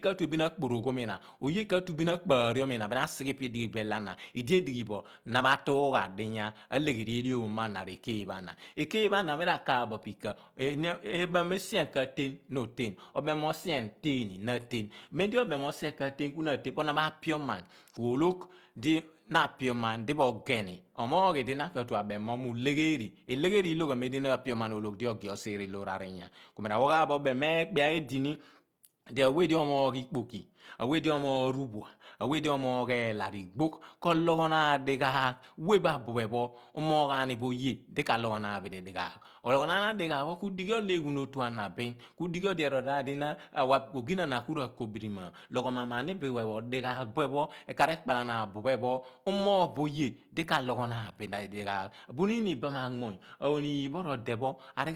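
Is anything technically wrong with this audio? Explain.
Yes. Throughout the speech there is plainly audible Opus compression, likely from a low bitrate around 24 kbps in CELT mode. Short of bits, the encoder fills bands with folded or noise content, so the sound turns grainy and rough rather than swirly. A spectrogram shows content reaching 20.3 kHz, with noisy, smeared upper bands but few holes.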